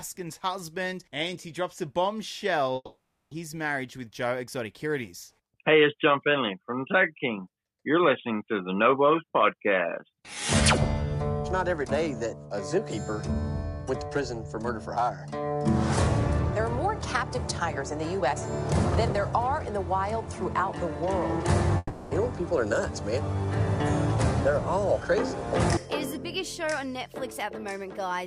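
At 2.75–3.33 s and 21.77–22.13 s the sound stretches into a fading buzz of 0.56 s and 0.34 s, drops briefly to silence, then resumes further on. This is likely a long network dropout. Unlike a brief glitch, the fill audibly decays and material is skipped.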